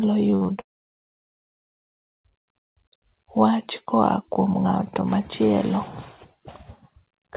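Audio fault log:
0.30–0.50 s, repeated packet loss (robotic sound): over this fifth of a second the stream keeps losing packets, four small holes in all, the longest about 49 ms. Each hole gets patched by stretching the last bit of sound, so roughly half of the stretch is made-up filler. That back-and-forth between real and repeated audio gives it the choppy texture, with little pieces of the speech simply gone.
0.60–1.76 s, long network dropout: here nothing gets through for over a second, about 1.14 s of speech missing. The receiver tries to carry on the last sound briefly, then gives up, and most of the gap (around 1.1 s) is plain silence. When the speech comes back it just picks up later on, with the lost part never played, which sounds like the link cut out, likely a network stall rather than anything at the source. The narrow call-codec sound, with nothing above 4 kHz, is audible either side of both faults.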